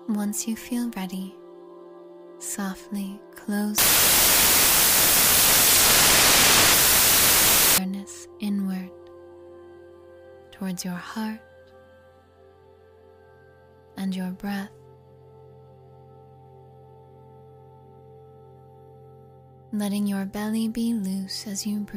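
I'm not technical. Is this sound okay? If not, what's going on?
No. From 3.78 to 7.78 s, samples built from the wrong bytes turn the sound into loud hiss. Unlike ordinary background noise, it swamps everything.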